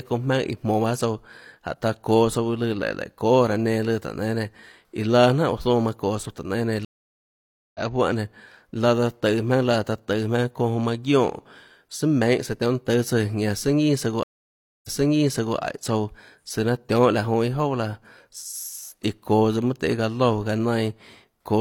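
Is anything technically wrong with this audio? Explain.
Yes. There are two stream reconnects. The connection dropped, and the player reconnected with a fresh decoder. At 6.85 s, a 0.9 s silence is followed by audio resuming about a second later. At 14.23 s, a 0.61 s gap is followed by audio resuming 0.73 s earlier, which repeats material.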